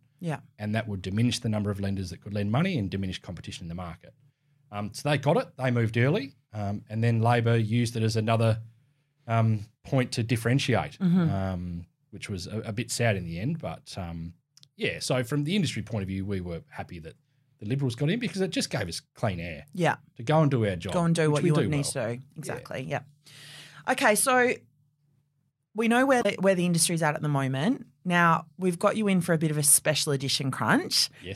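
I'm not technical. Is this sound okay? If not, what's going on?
No. At 26.19 to 26.26 seconds there is a brief glitch in the speech. This is damaged data in a compressed stream. A small piece of the file got corrupted, so the player misread it and had to find its place again.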